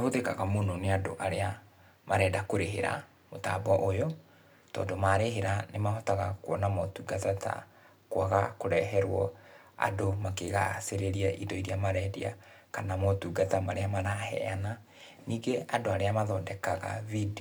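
Speech clip, no technical faults heard.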